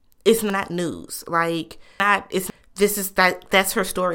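A speech clip with chunks out of order between 0.5 and 2.5 s. A 500 ms block of audio arrived three chunks late, so the material belonging at 0.5 s plays at 2.0 s, after the chunks that should follow it. Nothing is missing, but that stretch sounds jumbled, with hard joins at 0.5, 2.0 and 2.5 s. On a waveform or spectrogram, each join shows as an abrupt step or a thin vertical broadband line where the speech contours fail to line up.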